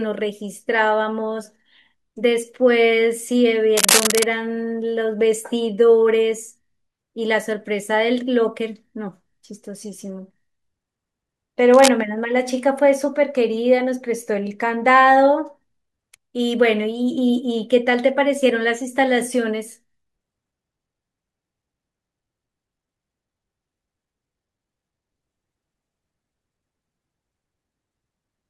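At 3.76 to 4.23 s, a burst of cable scratch noise lies over the speech, roughly as loud as the speech itself, heard as a dense, uneven scratching and rustling. A second, shorter burst follows at 11.73 to 11.89 s, somewhat quieter. The likely cause is a worn cable or connector being moved, its contact resistance jumping about rapidly. Unlike single clicks or steady hiss, this noise comes as crowded, irregular crackle that starts and stops with the movement.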